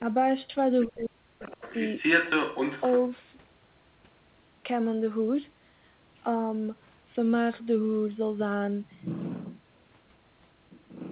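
Speech suppressed in double talk comes first, from 0.00 to 0.04 s, as a slight dip of about 5 dB. Both ends were likely talking at once, and the echo canceller, unable to tell the local talker from loudspeaker echo, pulled the level down.

The other side's voice leaking through appears from 0.81 to 1.05 s as a faint second voice about 30 dB under the speech. The echo canceller likely failed to fully remove the far end playing from the loudspeaker, so residual echo reaches the microphone.

Speech suppression in double talk returns from 0.85 to 1.51 s and is far deeper. Around half a second of speech is pushed down by as much as 40 dB, so the talker drops out in pieces while the far end overlaps.

The leak comes back more strongly from 1.42 to 3.06 s, with the other side's voice now roughly level with the talker's. This is a long stretch of uncancelled echo competing directly with the speech. 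Across the clip, nothing is heard above 4 kHz, which fits a narrowband G.711 telephone codec.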